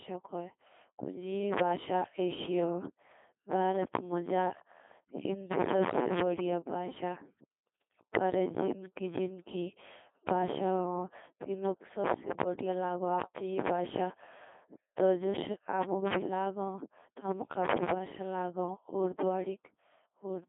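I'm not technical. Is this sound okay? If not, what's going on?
No. Codec 2 vocoder runs throughout: the speech is rebuilt from simple tones rather than the real recording, so it sounds robotic, buzzy and muffled, with heavy damage.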